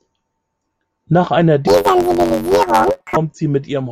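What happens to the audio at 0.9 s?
Nothing goes wrong at 0.9 s; the speech carries on intact through that moment, with no dropout, click or distortion.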